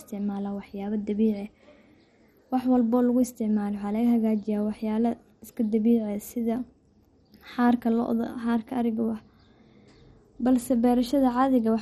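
From start to finish the speech is dull, with nothing above 13.9 kHz, and carries a heavy gurgling, granular texture. The likely cause is MP2 compression at a starved bitrate, which fits a rate near 56 kbps: upper sub-bands drop out and return while the surviving bands are coarsely quantised. A plain low-pass filter would dull the sound without the grain, and MP3 damage is more swirly and watery than this gritty flicker.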